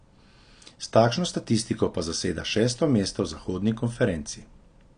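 From start to finish the speech sounds dull and smeared, with nothing above about 9.8 kHz and a watery, fizzy texture on sibilants and held sounds. This is likely AAC compression. The encoder spends its small bit budget on what the ear notices most, so it drops the top of the spectrum and coarsely quantises the rest, leaving gaps that warble. The plainly audible damage fits a low bitrate near 32 kbps.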